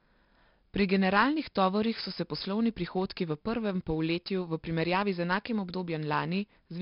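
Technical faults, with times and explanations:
Throughout, 4-bit ADPCM compression: coarse prediction steps leave heavy gritty hiss riding the speech level, with nothing above 5.3 kHz, fitting roughly 44 kbps.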